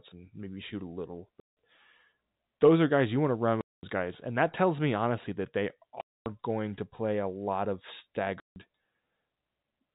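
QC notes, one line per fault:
1.40 to 8.56 s, packet loss filled with silence: four hard dropouts, at 1.40 to 1.56 s after "maybe shoot a little", 3.61 to 3.83 s, 6.01 to 6.26 s between "me honestly that they" and "going to play a", and 8.40 to 8.56 s after "play a lot of". The gaps last 170, 220, 250 and 160 ms, all whole multiples of 10 ms, which points to 10 ms packets. The receiver substituted silence for the lost packets, so each hole starts and ends abruptly.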